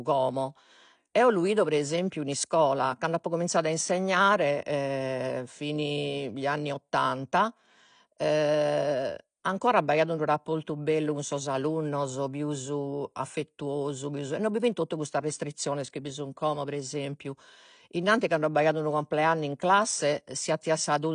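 From start to finish the speech is dull and smeared, with nothing above 9.8 kHz, and a fizzy, warbling texture clings to sibilants and held vowels. This is likely AAC compression, with the damage pointing to an AAC-LC encode at a low bitrate, around 32 kbps. On a spectrogram the energy stops flat at 9.8 kHz, with patchy holes and blotchy noise-filled bands below.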